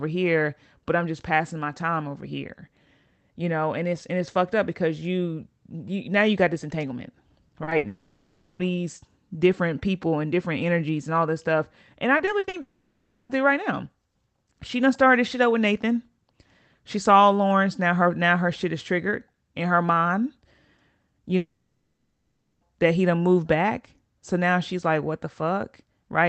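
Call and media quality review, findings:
Short concealed packet loss at 7.63 s and 7.69 s, right after "you got this entanglement": 40 ms then 20 ms smear from receiver concealment extending the prior sound. Unlike the burst, each hole is too brief to fade.

Burst of packet loss, 7.77–7.85 s: 60 ms of consecutive missing packets filled by an extrapolated tail that decays. A held buzz or fading hiss, longer than the short smears.

Long network dropout, three events. 7.87–8.61 s: 720 ms of continued then decaying sound, likely a network outage, no true silence. 12.61–13.31 s: 680 ms before "through right now", likely the same cause, about 10 ms of silence. 21.37–22.63 s: 1.24 s before "that he done moved", likely a longer outage, decaying into about 420 ms of silence. These differ from a burst by lasting far longer, so whole stretches of speech are gone.

Repeated packet loss (robotic sound), 12.17–12.55 s: five gaps of up to 40 ms each, concealment covering about 37% of the span, likely from network jitter or loss. 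A choppy texture, distinct from a single burst because the holes recur.

Opus call path at about 20 kbps, audio band-limited near 8 kHz.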